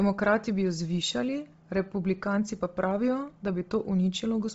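Throughout the speech, Bluetooth LC3 compression is likely at work: nothing above 7.8 kHz, with a breathy, grainy noise-filled top end, fitting a low LC3 bitrate near 24 kbps, unlike muffled MP3-style smearing.

From 0.13 to 3.74 s, faint clock slip clicks tick about once a second, around five in all. They are likely single samples dropped or repeated from a clock mismatch of about 30 ppm. Their steady spacing separates them from random dropouts.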